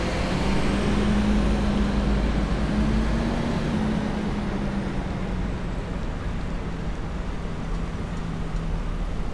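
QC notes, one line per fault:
3.73–9.33 s, wrong sample rate: everything drops about 1.5 semitones and slows to 0.92x speed, consistent with 24 kHz audio being played at 22 kHz without conversion.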